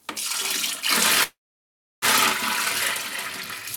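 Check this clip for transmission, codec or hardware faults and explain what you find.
One fault is present, a call audio freeze from 1.23 to 2.05 s. Packets were likely delayed and the jitter buffer ran dry, so the last sound was stretched into a fading fill lasting about 0.79 s, about 0.67 s of it near silence. The audio then resumes where it stopped, about 0.79 s late, with nothing lost.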